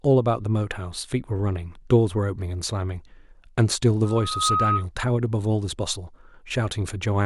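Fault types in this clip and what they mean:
Loudspeaker feedback squeal: the mic is hearing the speaker it drives, and at one frequency the loop gain tips past one, so that tone keeps feeding itself. Here it's a single whistling tone at 1.3 kHz that swells up over roughly half a second from about 4.04 s, ends up around 5 dB louder than the speech, and cuts off at about 4.87 s.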